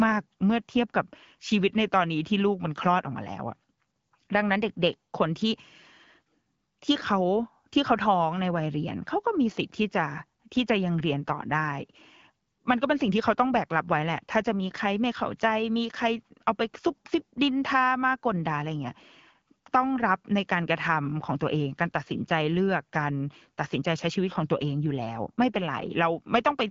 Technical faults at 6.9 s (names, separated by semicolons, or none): none